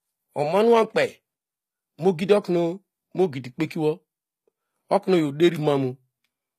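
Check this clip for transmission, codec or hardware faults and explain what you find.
One codec fault runs through the whole speech clip. HE-AAC compression is the likely cause: the treble is rebuilt by copying lower bands upward under a coarse envelope, so s sounds come out gritty and metallic, nothing survives above 14.9 kHz, and the plainly audible damage fits a low bitrate around 24 kbps.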